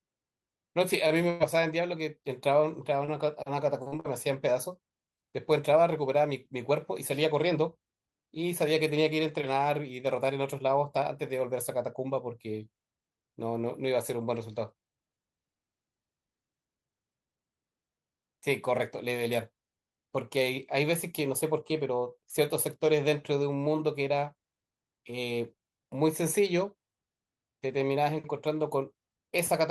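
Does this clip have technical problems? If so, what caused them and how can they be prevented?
Yes, four kinds of network fault are audible.

Short stall from a late packet, 1.07 to 1.13 s: a packet arrived late and the jitter buffer ran dry, so the last sound was held for about 26 ms before playback resumed with nothing lost. A slightly deeper jitter buffer would absorb a delay this small.

Burst of packet loss, 1.30 to 1.43 s: consecutive packets went missing, so the receiver extended and faded the last sound for about 99 ms, then jumped ahead, skipping roughly 40 ms of speech. Forward error correction or redundant packets would cover a burst this short.

Repeated packet loss (robotic sound), 3.05 to 4.07 s: three separate gaps, the longest 43 ms, were each patched by continuing the previous sound. About 11% of this span is concealed and roughly 80 ms is missing, which makes the speech choppy. 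A more stable connection or stronger loss protection would prevent this.

Jitter buffer speed-up, 5.69 to 7.02 s: delayed packets arrived together and overfilled the buffer, so the receiver trimmed short pitch-period pieces, removing around 50 ms. Speech runs at 103% speed with its pitch unchanged. Smoother delivery would reduce these pile-ups.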